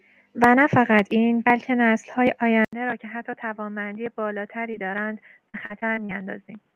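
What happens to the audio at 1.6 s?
At 1.6 s you're hearing sample clock jitter, which runs through the whole clip. The converter's clock wobbles by somewhere under a microsecond, so samples land slightly off-time, leaving a faint hiss or roughness well below the speech that grows on loud, bright sounds.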